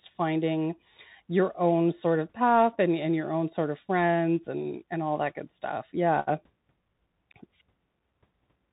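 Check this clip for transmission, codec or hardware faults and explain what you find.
One fault runs through the whole clip: the speech has passed through a Bluetooth CVSD headset codec. The damage is plainly audible from start to finish. CVSD sends a single bit per sample, stepping the waveform up or down. Its step size adapts to the signal, and the sound fits a 64 kbps stream. The band stops near 4 kHz, so the speech sounds narrow and telephone-like. Loud, bright sounds outrun the step and distort. S sounds come out scratchy. A grainy hiss sits under the speech.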